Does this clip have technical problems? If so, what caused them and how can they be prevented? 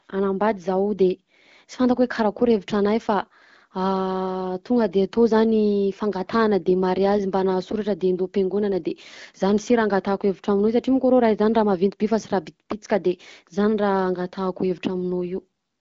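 No, the speech shows no technical faults, and it carries the band-limited character of an AMR wideband (HD Voice) call at 12.65 kbit/s, a rate at which this codec keeps speech clear.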